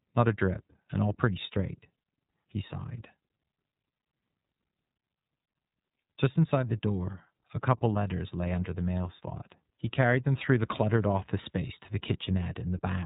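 A speech recording coded throughout with the iLBC codec: nothing passes above about 3.8 kHz, and each 30 ms frame is coded independently, leaving a plainly rough, synthetic edge. That narrowband, buzzy roughness, rather than warbling or swirling artefacts, sets it apart from low-bitrate transform codecs. The sound fits a bitrate near 13.3 kbps.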